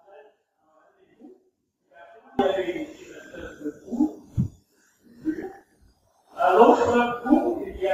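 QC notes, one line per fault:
0.00–2.39 s, audio dropout to a faint residue: the clip opens already cut out, leaving only faint sound about 25 dB down, likely a broken signal path whose output stayed live.
2.95–3.62 s and 5.37–6.36 s, DAB burbling: bit errors of under 1 percent slip past error correction into the MP2 data, giving noise blips in individual sub-bands. The error rate is higher in the second patch.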